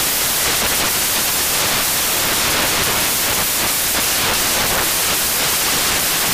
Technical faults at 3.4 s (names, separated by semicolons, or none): samples built from the wrong bytes